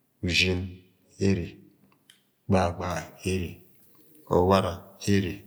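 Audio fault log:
2.90–5.47 s, pre-emphasis left on: the treble follows a 50 µs FM boost curve, about 10 dB up at 10 kHz relative to 1 kHz, because the matching de-emphasis cut was never applied. The speech turns thin, bright and sibilant, and unlike a flat shelf boost, the lift keeps climbing with frequency.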